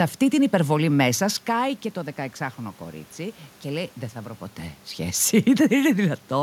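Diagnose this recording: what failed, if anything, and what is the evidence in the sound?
Nothing stood out on listening; the steady room noise and the level shifts near 1 s and 4 s, where the talker moves relative to the microphone, belong to the recording itself.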